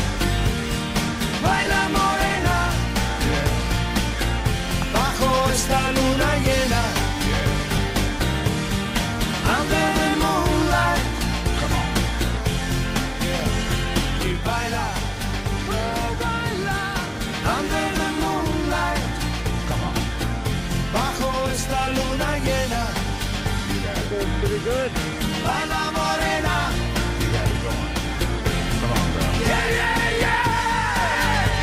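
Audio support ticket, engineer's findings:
Lost LE Audio frames: brief noisy smear at 1.65 s, longer one 7.76–7.78 s. Gaps of 7.5 and 15 ms, fitting one and two LC3 frames. Decoder concealment replays the last spectrum with scrambled phase, hence the hiss instead of dropouts.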